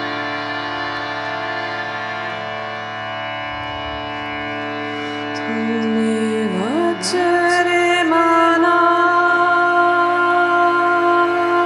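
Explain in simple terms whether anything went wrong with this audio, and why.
Throughout the clip, every sound is followed by a fainter copy about half a second later. This is a doubled audio track. The copy is a clean repeat with no fading echo. It was likely captured twice, once through a slower path.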